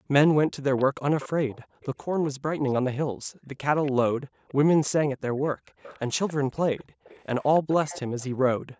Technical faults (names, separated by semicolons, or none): background gated by the echo canceller; echo leak